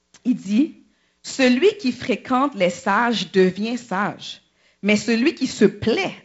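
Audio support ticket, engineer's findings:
Nothing to flag on this one, just speech over G.722 wideband coding that sounds consistent with 48 kbit/s, reaching up to about 7.7 kHz with only the light coding texture that path normally leaves.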